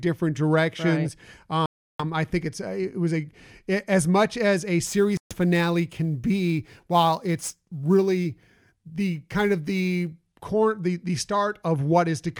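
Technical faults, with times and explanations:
1.66–2.04 s and 5.17–5.34 s, Bluetooth stall: the sound drops to silence for 336 ms just before "I think it's it" and for 134 ms right after "as much as a", then resumes. This is likely a wireless link whose packets were delayed by interference, letting the receiving buffer empty until resent data arrived.
4.86–10.13 s, sample clock jitter: a fine hiss and roughness rides on the sound from "as much as a" through to "core the the", strongest on loud and bright passages and absent in the gaps. The converter's timing wanders by around 7 microseconds, so each sample lands slightly off time. The error grows with the waveform's slope and sits roughly 30 dB below the signal.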